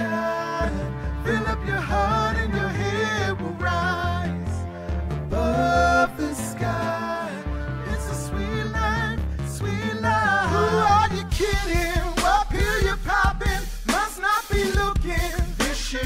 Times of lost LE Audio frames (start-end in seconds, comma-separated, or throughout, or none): none